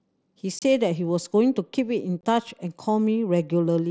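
At 0.59 s and 2.21 s the speech drops out for about 30 ms and 23 ms, which fits a few 7.5 ms mSBC frames lost between headset and phone. This is unconcealed Bluetooth headset packet loss: the gaps are filled with silence or an idle pattern, with hard edges.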